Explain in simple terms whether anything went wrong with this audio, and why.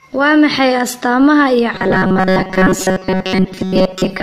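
Two things went wrong. Throughout the whole clip there is generation loss: the speech sounds swirly, smeared and hollow, and the starts of sounds are blurred. It likely went through a lossy AAC encoder around five times, with each pass adding fresh damage on top of the last. That is what sets it apart from a single low-quality encode, which sounds dull but not this watery and smeared.

From 1.74 s, right after "maxay astaamaha iyo", to the end at 4.2 s, there is robotic sound from repeated short buffers. The speech becomes a stiff, metallic buzz at a fixed 188 Hz. It still roughly follows the talking. The likely cause is playback that kept repeating the last tiny slice of audio, about 5 ms long, while most of the real audio was skipped. Unlike codec damage, this buzz has a steady pitch and starts suddenly at one point.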